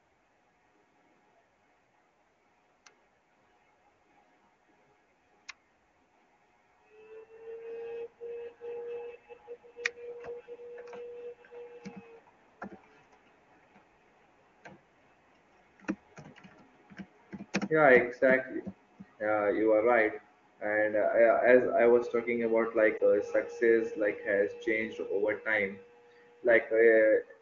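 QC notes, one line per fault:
22.98 s, lost AMR speech frame: one 20 ms frame fails its checksum after a radio error, so the AMR-WB (HD Voice) decoder, which carries the speech cleanly at what sounds like its top rate, fills the gap by reusing the last good pitch and vocal tract settings at lowered gain. A single lost frame gives only a brief dip or warble, not a drawn-out fade, and the speech returns briefly weak or rough.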